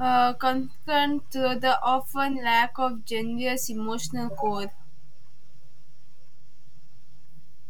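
A DC offset runs through the entire speech clip, from the first sample to the last: the waveform sits shifted off zero by a constant amount of about −30 dBFS. It isn't audible as a sound in itself, which separates it from mains hum or low rumble, both of which have a pitch or movement. It shows up only as fixed energy at 0 Hz, and it eats into headroom on one side of the waveform.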